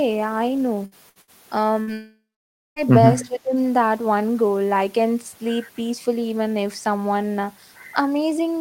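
Four short bursts of packet loss come early in the speech, at 0.85, 1.09, 1.21 and 1.82 s, each lasting about 90 ms. In each one roughly 60 ms of audio never arrives, and the receiver fills the hole by extending the last received sound while fading it. A voiced segment turns into a brief held buzz and an unvoiced one into a decaying hiss. The speech then picks up slightly further along, with the lost fragment gone.

Just after the last burst, from 1.93 to 2.79 s, the speech disappears for most of a second, which points to a long network dropout. About 840 ms of audio is lost. Concealment first stretches the final sound into a fading buzz or hiss, but that runs out, leaving roughly 570 ms of near silence before the speech returns mid-stream, without the missing section.

From 3.19 to 3.25 s a faint delayed copy of the speech is audible, roughly 25 dB below the main signal and trailing it by about 310 ms. 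This is likely an echo leak: the far end is playing the call over a loudspeaker, and its echo canceller let part of the microphone pickup of that playback through, so it was sent back as a short scrap of echo.

Immediately afterwards, from 3.26 to 3.57 s, the level of the speech sags by as much as about 15 dB for roughly a third of a second. This matches speech suppressed in double talk. Both ends were likely speaking at once, and the echo canceller, unable to tell the local talker from the loudspeaker echo, attenuated everything it was passing.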